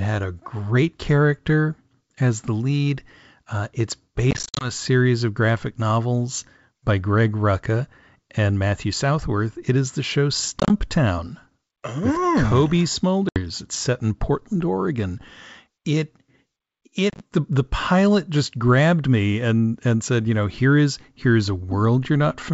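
Speech with packet loss on an ADPCM call at 4.31–4.71 s (before "series of graphic novels"), 10.60–10.71 s (after "is the show"), 13.29–13.39 s and 17.10–17.21 s (before "the the pilot just"). The waveform shows scattered silent gaps of up to 50 ms, appearing as hard-edged vertical blank stripes on a spectrogram. After each gap, the decoder's predictor and step size are out of step with the sender's, so the audio returns slightly distorted before settling.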